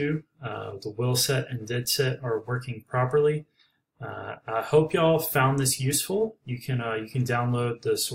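Nothing in the audio stood out as a technical problem on listening.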